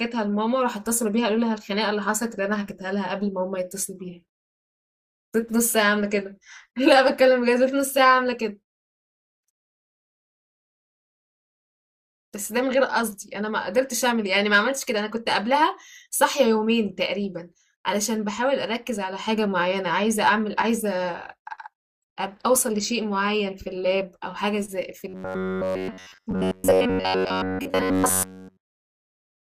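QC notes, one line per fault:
25.08–29.5 s, robotic sound from repeated short buffers: rigid, metallic 93.8 Hz buzz loosely following the speech, likely from a 10.7 ms chunk looping while new audio fails to arrive.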